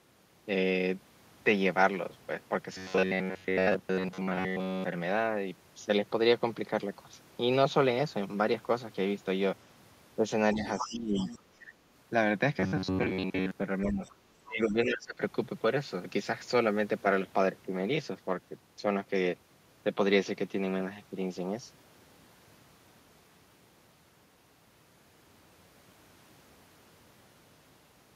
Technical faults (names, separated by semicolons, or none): robotic sound from repeated short buffers; other side's voice leaking through; speech suppressed in double talk